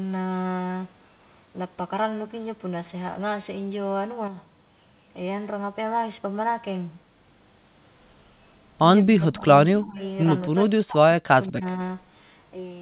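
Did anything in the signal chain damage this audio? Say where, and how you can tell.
Yes. Speech suppressed in double talk damages the audio at 9.02–9.45 s, 9.71–10.01 s, 10.43–11.02 s, 11.19–11.3 s and 11.48–11.8 s. This happens at the call-processing stage. The speech dips by roughly 15 dB at first, then deepens to about 25 dB and finally to around 40 dB. The likely cause is the echo canceller failing to separate the near-end talker from the far-end loudspeaker echo and suppressing the near-end talker with it.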